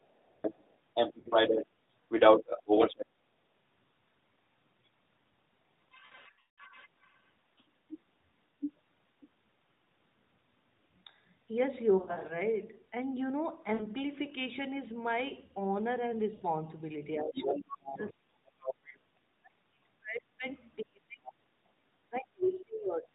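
From 0.01 to 3.06 s a second voice sits in the background, slightly louder than the talker. It is most likely the other side's voice leaking through, from a loudspeaker echo the canceller did not fully remove.

At 1.20 to 1.28 s there are lost AMR speech frames. About 60 ms is gone, which fits three 20 ms frames. The decoder repeats the last good sound at falling level, so you hear a brief dip and warble. The sound is narrowband AMR, with nothing above 4 kHz.

From 6.06 to 6.61 s the losses are heavier. About 360 ms drops out, scattered over 520 ms, with the longest run 180 ms. The sound smears, fades toward silence, then returns rough.

From 7.58 to 9.29 s the leaking voice returns, a little below the talker.

More lost frames follow. From 11.98 to 12.40 s, 180 ms is lost across 320 ms in runs of up to 60 ms, giving a stuttering warble. Two short dips follow: 60 ms at 13.74 to 13.86 s and 80 ms at 16.34 to 16.45 s.

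From 17.16 s to the end, the talker's speech is suppressed in double talk. Over about five seconds the voice dips and breaks up in pieces, at worst falling by roughly 35 dB. The canceller likely cannot separate the talker from the echo, so it pulls both down. Within that stretch the leaking voice is heard from 17.34 to 18.94 s, a little below the talker. It comes back as faint scraps at 21.27 to 21.32 s and 22.44 to 22.59 s.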